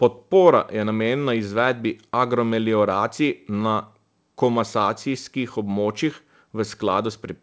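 This speech clip has nothing technically wrong with it; it came through a wideband call codec, which fits G.722 at 64 kbps, leaving nothing above 8 kHz.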